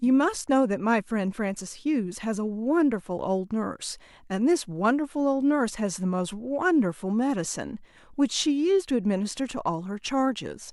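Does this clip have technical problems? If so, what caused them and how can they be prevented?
No, this clip has no technical problems, so there is nothing to prevent.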